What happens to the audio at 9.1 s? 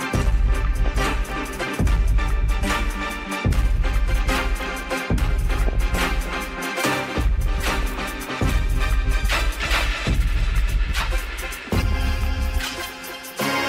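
Nothing goes wrong at 9.1 s; the audio runs on intact through that moment, with no dropout, click or other fault.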